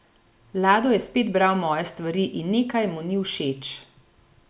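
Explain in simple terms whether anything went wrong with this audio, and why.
Nothing went wrong here: the speech comes through steadily without any dropouts, glitches or odd noises that would point to a technical problem.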